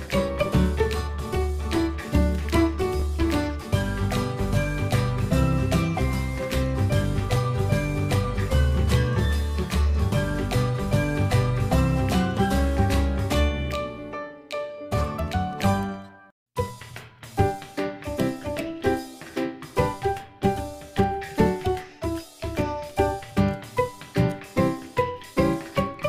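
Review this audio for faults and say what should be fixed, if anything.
A sharp loud pop at 3.00–3.03 s, a few decibels above the sound running underneath, likely a voltage spike from a plug, switch or static. To prevent it, secure all connections and avoid switching or handling equipment while recording.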